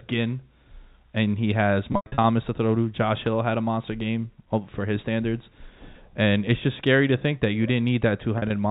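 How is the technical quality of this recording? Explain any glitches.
Two glitches come from packet loss with pitch repetition. At 1.92–2.24 s, between "and he has" and "to throw to", about 220 ms drops out across 320 ms. At 8.38–8.50 s, 60 ms drops out. The receiver loops the last pitch period, producing a buzzy held tone that fades toward silence on the 100 ms run. All of this sits over narrowband G.711 A-law telephone audio, capped at 4 kHz.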